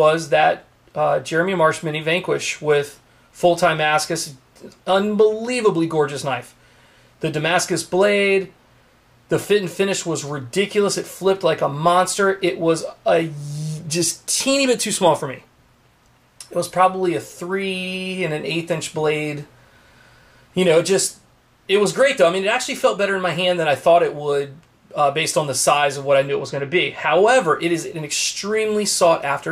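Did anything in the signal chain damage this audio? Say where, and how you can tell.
Yes. Channel delay (comb filtering) appears from 26.28 to 27.28 s as a dull top end with a fixed notch near 10 kHz. One channel lags by roughly 0.05 ms, consistent with about a two-sample offset at the driver or buffer stage, so the mono sum cancels there.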